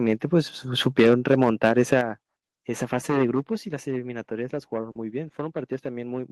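From 0.86 to 1.94 s, the microphone input was likely set too high, driving the peaks about 6 dB past the converter's ceiling. This is microphone overload. The tops of the loudest moments are flattened, and a small share of the waveform is sheared off. The result is a harsh, crackly edge on the strongest syllables.

At 1.00 s, partway through that distorted stretch, the input volume likely stepped down by about 2 dB. Further microphone volume step-downs follow at 2.01 s, about 5 dB, and at 3.42 s, about 3 dB. Each time, the speech and the background noise drop together in one abrupt step rather than fading.

From 4.91 to 4.97 s, there is short concealed packet loss. About 40 ms of audio failed to reach the decoder in time, and the receiver filled that gap with a 40 ms synthetic continuation of the preceding sound before blending back into the real signal. It is heard as a brief smear or wobble in the speech.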